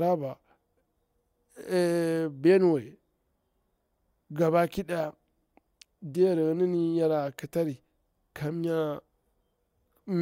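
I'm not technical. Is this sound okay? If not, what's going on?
Yes, nothing stood out as a problem when listening to this recording.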